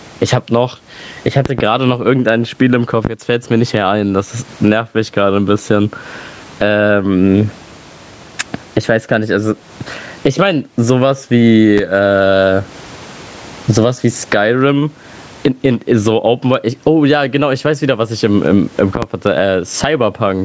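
Throughout the speech, the input gain appears set far too high, likely with a fast limiter clamping down on every loud syllable. The result is gain pumping, a swing of roughly 25 dB, leaving the speech squashed and flat in level.

Sudden voltage spikes, likely from a plug, switch, static or driver glitch, break into the signal as a loud pop on top of the speech, which carries on underneath. A double pop comes at 1.46 to 1.62 s, single pops at 3.05 to 3.08 s and 11.78 to 11.81 s, and another double at 18.95 to 19.06 s, each about 15 to 25 dB above the voice.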